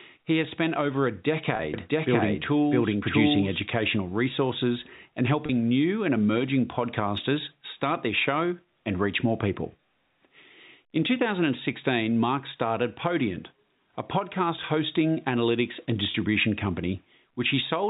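At 1.56 to 1.59 s a 30 ms gap, which fits a single lost packet, is bridged by packet loss with pitch repetition: the receiver loops the last pitch period, so the sound briefly holds on a slightly buzzy, static tone before normal speech resumes.

From 1.74 to 3.60 s a doubled audio track appears. A second full-band copy, roughly as loud as the original and trailing by about 0.7 s, likely comes from a slower second capture path. It switches in and out abruptly, with no decay or room colouring.

The same packet-loss concealment recurs at 5.46 to 5.49 s and 16.11 to 16.14 s, again 30 ms each, with the same short, buzzy hold. Throughout, the G.711 telephone band limit at 4 kHz is audible as the expected narrowband sound.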